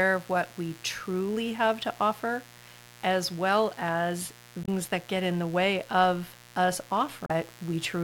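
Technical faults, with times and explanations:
throughout, mains buzz: a steady, raspy 60 Hz buzz sits about 25 dB below the speech, caused by switching spikes from a dimmer, rectifier or unshielded lead adding harmonics that extend into the kilohertz range.
4.62 to 4.68 s, damaged data in a compressed stream: a short glitch between "offer as well as" and "that get in the", where corrupted frames confuse the decoder until it resyncs.
7.26 to 7.31 s, damaged data in a compressed stream: another brief blip as the decoder misreads bad frames, loses sync and skips ahead to the next valid header.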